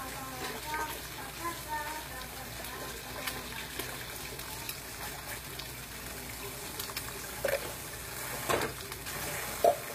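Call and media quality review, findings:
Treble rebuilt rather than coded, likely HE-AAC compression at a low rate, consistent with roughly 24 kbps; band replication copies lower bands upward under a coarse envelope. Throughout, whole clip: high end stays bright but synthetic, gritty, metallic edge on transients and hiss-like content. Misaligned harmonics above the crossover. Codec damage plainly audible.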